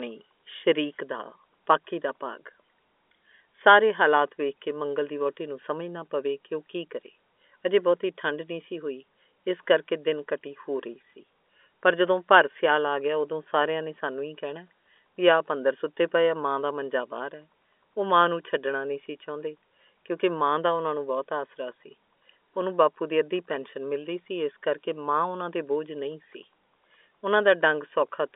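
There are no technical faults to describe in this speech recording, which comes through a telephone-band line with nothing above 3.6 kHz.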